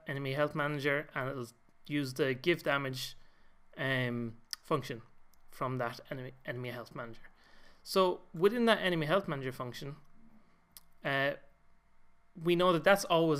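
No technical faults occur at any point in the clip, so there is nothing to describe in time order.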